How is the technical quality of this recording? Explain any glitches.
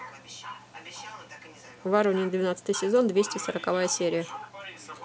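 The recording is technically sound, with no glitches or faults anywhere in the signal.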